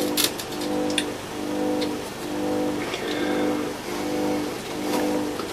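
No technical faults can be heard anywhere in the audio. There is nothing to mark at any point in the clip.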